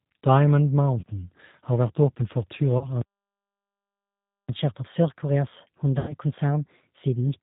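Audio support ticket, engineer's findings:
Band-limited, slightly rough, synthetic speech throughout, nothing audible above 4 kHz. Sound points to the G.729 codec, likely G.729A at 8 kbit/s. Speech is rebuilt from a vocal tract filter, pitch predictor and sparse pulses, which adds plainly audible codec damage.

Brief smear fading out at 1.00–1.04 s and 2.78–2.87 s, each about a 30 ms gap; longer one at 5.99–6.13 s, about 90 ms. VoIP packet loss concealed by the speech codec: decoder extends last pitch and filter at falling gain, and speech stays weak until the frame history recovers.

Output goes silent mid-flow at 3.01 s for 1.47 s, resuming at 4.49 s. Playback stall, likely from the player buffer running dry or its thread being blocked.

From 4.49 s to the end, speech runs faster and higher, about 1.15× speed and roughly two semitones up. Catch-up at higher speed: player resamples its backlog to recover some of the time lost in the stall.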